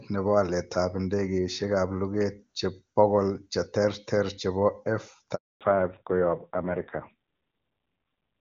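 At 5.35 s there's a handover gap: the call jumped networks, no speech frames came through, and the sound just drops out for about 260 ms until 5.61 s. From 5.61 s to the end you get a fallback to narrowband. The wideband link at about 23.85 kbit/s gives way to something that fits AMR-NB at 5.9 kbit/s. Everything above 4 kHz is gone, so the speech turns dull and rougher.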